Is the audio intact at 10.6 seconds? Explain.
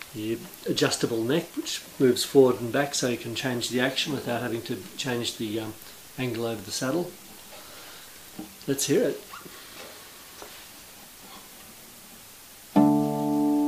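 Yes, the audio is intact at 10.6 seconds, with no dropout, click, distortion or other fault at that moment.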